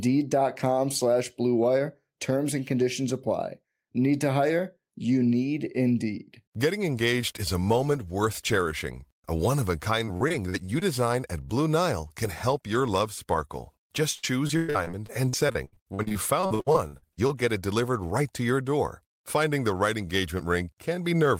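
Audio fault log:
10.05–10.83 s, repeated packet loss (robotic sound): six short dropouts, the longest about 45 ms, each patched by stretching the preceding sound. About a fifth of this stretch is filled-in audio, so the speech turns briefly choppy.
14.17–17.31 s, repeated packet loss (robotic sound): about 25 holes in quick succession, up to 114 ms long, each filled by extending the last sound. With nearly a third of the span concealed, the speech sounds choppy, with pieces missing.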